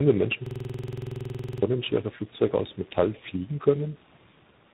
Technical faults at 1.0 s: tandem speech coding; system hang loop

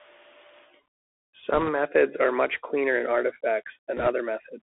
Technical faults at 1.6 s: Bluetooth CVSD headset codec; bit errors on a Bluetooth voice link

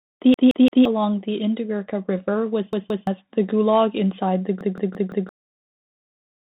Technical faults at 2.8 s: Bluetooth CVSD headset codec; repeated buffer

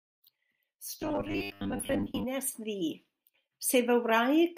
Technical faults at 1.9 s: robotic sound from repeated short buffers

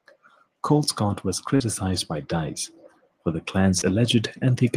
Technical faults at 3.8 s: short concealed packet loss

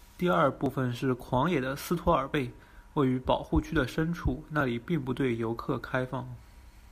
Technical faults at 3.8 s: none

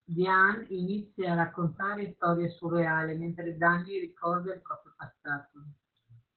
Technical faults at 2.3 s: Opus voice compression

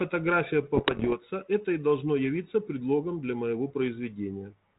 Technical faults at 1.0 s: bit errors on an ADPCM link

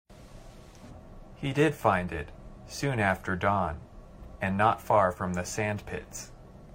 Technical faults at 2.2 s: none

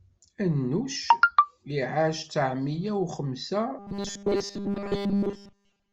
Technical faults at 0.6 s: none

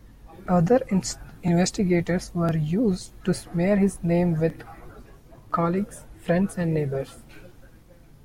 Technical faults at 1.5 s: overlapping chunks

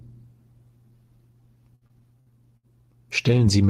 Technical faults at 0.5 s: none

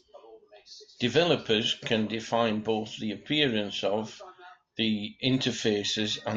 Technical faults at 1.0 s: none

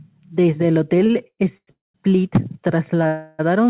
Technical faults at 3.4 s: call audio freeze

